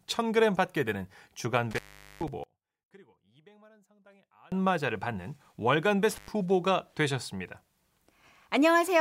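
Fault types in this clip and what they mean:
intermittent contact: A loose connection briefly opens, cutting the speech out from about 1.71 to 2.28 s for roughly 0.43 s, and from 6.10 to 6.28 s for about 0.10 s. The waveform collapses to a thin noise floor, with broadband vertical click lines bracketing each gap on a spectrogram.
one channel inverted: From 2.44 to 4.52 s the speech drops by about 31 dB to a faint residue, likely because one stereo channel's polarity is reversed and the shared signal cancels in the mono sum. The waveform shrinks sharply, and the spectrogram fades.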